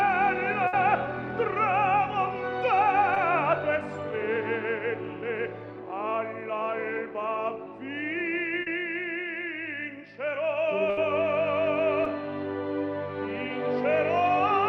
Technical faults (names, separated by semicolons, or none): burst of packet loss; short concealed packet loss